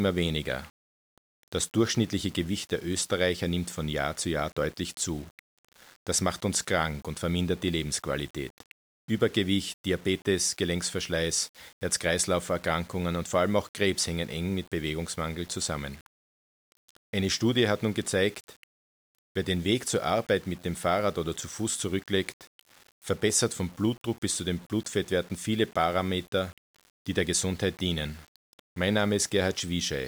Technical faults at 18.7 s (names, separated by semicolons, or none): low bit depth without dither